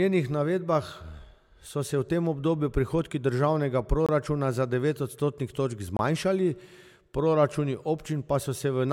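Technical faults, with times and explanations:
4.06–4.09 s and 5.97–5.99 s, block of digital silence: the speech drops to silence for about 23 ms, once between "tem obdobju prihodki državnega" and "za devet odstotnih točk", again after "za devet odstotnih točk". This fits an unfilled 1024-sample buffer. Hard edges without any fade or concealment set it apart from a faded dropout.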